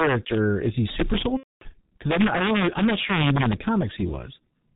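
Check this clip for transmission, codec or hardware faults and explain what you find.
Three faults are audible in this speech clip: two run throughout, and one is a single dropout.

Integer overflow runs through the whole clip. The signal is driven about 4 dB past the integer limit. Peaks that exceed it wrap to the opposite sign instead of being clipped. A small fraction of samples, around one percent, flip across the full range. Each one produces a violent, sharp crack on the loudest moments.

The G.723.1 codec also affects the whole clip, with heavy damage. The sound points to its low rate, roughly 6 kbit/s. It works in 30 ms frames and passes nothing above 4 kHz. Its voice model updates slowly. The speech sounds muffled and hoarse, and consonants are blurred.

VoIP packet loss concealed by the speech codec occurs from 1.37 to 1.64 s. The gap fits about eight lost 30 ms frames. The decoder extends its last pitch and filter and lowers the gain each frame. 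The speech stretches into a fading buzzy tone or coloured noise, then mutes from the third lost frame. It stays weak briefly after packets return.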